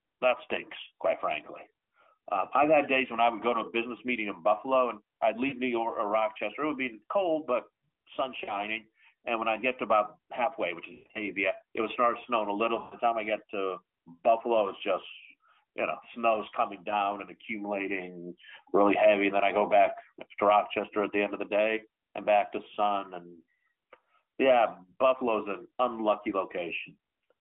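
Lost AMR speech frames occur at 5.48, 8.44, 10.94 to 11.19, and 12.80 s. Corrupted frames made the decoder repeat old settings with falling gain. The sound smears, then fades briefly, worst near 11 s.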